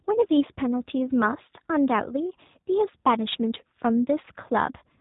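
From start to finish the speech carries plainly audible G.729 codec damage, consistent with the G.729A variant at a rate that fits 8 kbit/s. The codec discards the waveform and rebuilds each 10 ms frame from a vocal tract filter, a pitch predictor and a few pulse positions, so nothing above 4 kHz survives. The result sounds band-limited and dull, with a rough, slightly synthetic quality.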